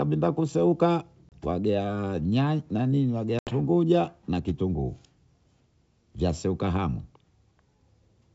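At 1.29 s and 3.39 s, packet loss on an ADPCM call cuts hard silent holes of 30 ms and 80 ms. The decoder's predictor loses step, so speech returns distorted.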